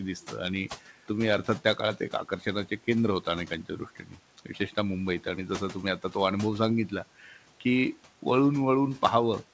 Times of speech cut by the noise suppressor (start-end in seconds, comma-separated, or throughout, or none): 3.96-4.17, 7.20-7.37